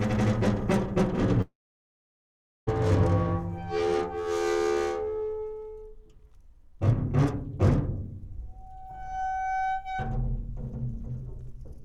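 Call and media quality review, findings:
Long network dropout, 1.41–2.69 s. Audio stops for about 1.3 s; the last sound smears into a brief fading buzz, then roughly 1.1 s of silence. Likely cause: network loss on the receive path, with the jitter buffer's concealment running dry. Unlike a short packet-loss glitch, concealment gives out and goes silent. Unlike a stall, playback resumes at 2.69 s with the lost section skipped, not delayed.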